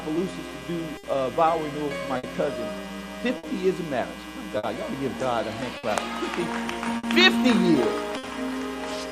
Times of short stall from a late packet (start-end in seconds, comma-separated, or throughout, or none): 0.97-1.05, 2.17-2.25, 3.37-3.45, 4.57-4.65, 5.77-5.85, 6.97-7.05, 8.17-8.25